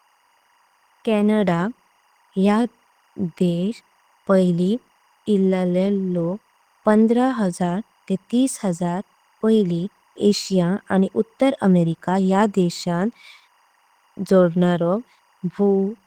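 Throughout the speech, timecode bleed leaks in at about 40 dB below the signal: a faint chirping warble near 1 kHz and 2 kHz, visible on a spectrogram as steady paired lines pulsing at 24 frames per second. Opus voice compression in hybrid mode, consistent with roughly 16 kbps, makes the voice plainly hoarse and slightly robotic, with coarse, smeared upper bands reaching 20.2 kHz in the spectrogram.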